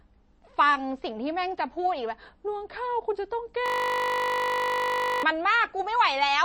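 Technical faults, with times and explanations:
Throughout: MP3 compression. The speech sounds watery and swirly, with plainly audible smearing and nothing above 8.3 kHz. The likely cause is a low-bitrate MP3 encode, which fits roughly 32 kbps, cutting the treble and dropping weak frequency detail that flickers between frames.
3.66–5.23 s: system hang loop. The sound turns into a steady 50 Hz buzz as one 20 ms slice repeats exactly, close to 80 times. The system stalled while the audio hardware kept replaying the same short buffer.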